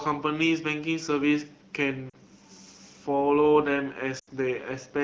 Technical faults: lost AMR speech frames

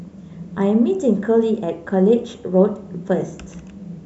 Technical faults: dropped samples

